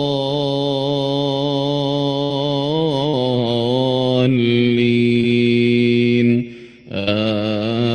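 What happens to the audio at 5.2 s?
At about 5.21 to 5.25 s there is a short concealed packet loss. Roughly 20 ms of audio arrived too late to decode, and the receiver patched the gap by extending the preceding sound and then blending back into the real signal. It comes through as a brief smear or wobble rather than a hole. A plain dropout would leave an audible gap of silence, and a click would be a sharp spike with nothing stretched.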